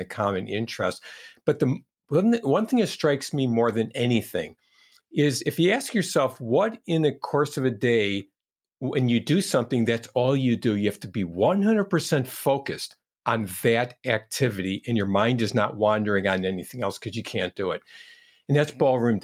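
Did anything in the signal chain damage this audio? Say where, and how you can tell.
No, nothing in the signal chain audibly damaged this recording: the speech signal stays continuous and intact, with no stage along the path leaving a mark that can be heard.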